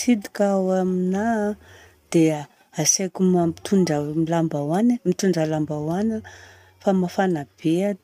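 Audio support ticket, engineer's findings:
No audible faults found in the speech recording.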